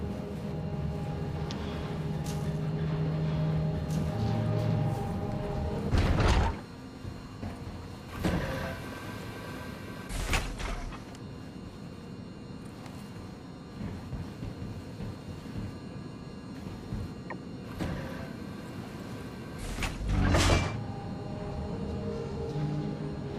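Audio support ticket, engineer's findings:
Doubled audio track, 0.00 to 4.92 s, already running at clip start. Full-band copy trails by about one and a half seconds, roughly 5 dB down. No decay or room colour. Likely a second, slower capture path. Copy cuts off abruptly at 4.92 s.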